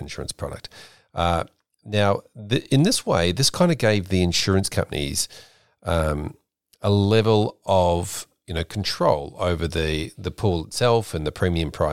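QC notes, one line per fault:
Nothing to report: the speech carries no fault.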